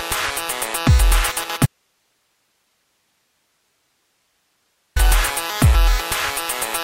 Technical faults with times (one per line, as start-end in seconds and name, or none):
1.66-4.96 audio dropout to a faint residue